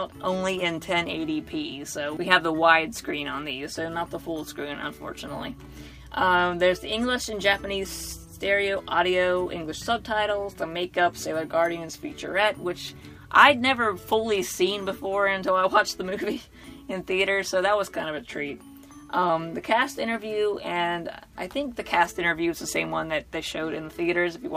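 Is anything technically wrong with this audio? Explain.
No, nothing stood out as technically wrong on listening.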